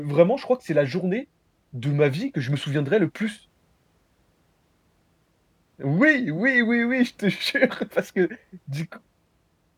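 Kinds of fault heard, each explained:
Nothing stood out as a fault on listening to this speech recording.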